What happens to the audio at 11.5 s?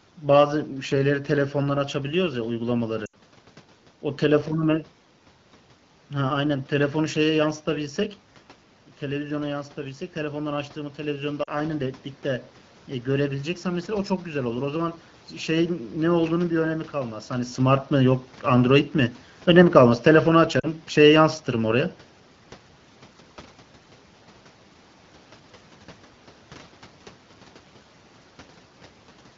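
Between 11.44 and 11.51 s, radio errors corrupted AMR speech frames, so lost AMR speech frames were concealed. The wideband decoder repeated its last good pitch and vocal tract settings at falling gain for about 40 ms, which fits two lost 20 ms frames. You hear a short smeared, warbling dip before the voice resumes, briefly rough.

Around this moment, automatic gain rising is also under way. After the talker moved away near 8 s and the input fell by about 9 dB, the gain control raised its gain by about 6 dB from 9.04 to 14.96 s. The voice and the room noise swell together gradually across that span.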